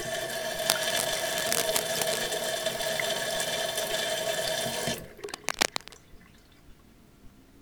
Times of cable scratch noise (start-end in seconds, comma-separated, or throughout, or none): 0.63-2.22, 5.24-5.98